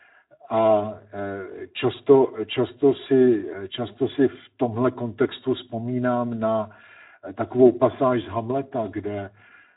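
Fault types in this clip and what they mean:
Channel delay (comb filtering): one channel runs roughly 3 ms behind the other, and mixing them to mono cancels a fixed ladder of frequencies starting near 150 Hz. The result is a steady hollow, phasey colour that never sweeps, unlike a flanger.
Speex codec: a CELP speech codec at a low quality setting, consistent with about 11 kbps. The speech sounds plainly hoarse and grainy, and nothing comes through above 3.8 kHz. That noisy, hoarse texture is codec damage, not the static hollowness of the comb.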